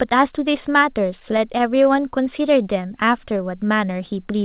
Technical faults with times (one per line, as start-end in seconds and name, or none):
1.20-1.88 scattered short gaps
2.29-3.43 jitter buffer slow-down